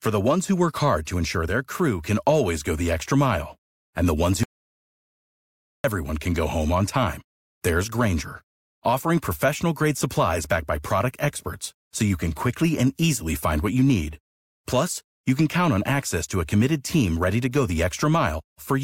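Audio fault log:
4.43–5.84 s, audio dropout to silence: the speech stops abruptly and about 1.41 s is missing before it resumes on "can go home on". The gap holds silence with no room tone, likely from the input being lost.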